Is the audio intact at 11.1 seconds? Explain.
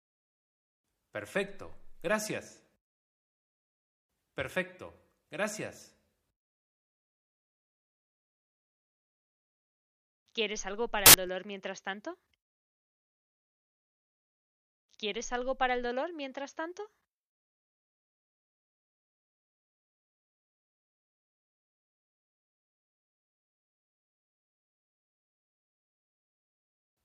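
No. From 11.06 to 11.14 s the samples are built from the wrong bytes: misaligned or swapped byte order turns each value's fast-changing low bits into its large part. It sounds like a loud, harsh broadband noise burst, seen as a dense waveform block and broadband spectrogram smear.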